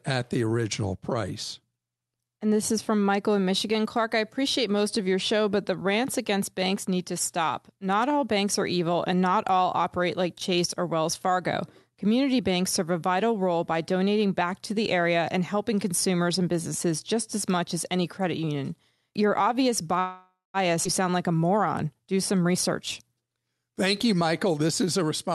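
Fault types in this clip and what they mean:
Call audio freeze: From 19.99 to 20.57 s the speech stalls, likely because packets were delayed and the jitter buffer ran dry. The last sound is stretched into a fading fill, including about 200 ms of silence, then speech resumes where it stopped, with nothing lost.
Skip ahead: Between 20.84 and 20.88 s playback jumps forward almost without a gap, dropping roughly a third of a second of speech. The audio on either side of the cut is butted together directly, taking back part of the delay built up by the freeze.
Jitter buffer speed-up: From 22.33 s to the end, the receiver trims short pitch-period pieces repeatedly to shrink an overfull buffer. Speech runs at 108% speed with unchanged pitch, sounding hurried, and about a fifth of a second is removed in total.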